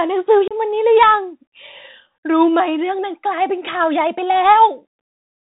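Bluetooth CVSD headset codec damage runs through the whole of this speech clip and is plainly audible, consistent with a 64 kbps CVSD link. Each sample is coded as a single up-or-down step whose size adapts to the signal, so the band stops near 4 kHz, loud high-frequency energy outruns the step size and distorts, sibilants turn scratchy, and a granular hiss sits beneath the speech. Unconcealed Bluetooth headset packet loss strikes between 0.48 and 0.54 s, removing about 30 ms of audio. That amount fits several short voice packets dropped on the way between headset and phone. Nothing covers the gap, so silence or an idle pattern fills it, leaving a hole with abrupt edges. Because the adaptive step has to rebuild after the gap, the speech resumes briefly quieter.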